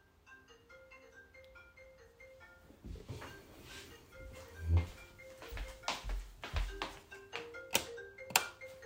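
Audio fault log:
No faults were found in this recording of sounds. Nothing in it calls for a log entry.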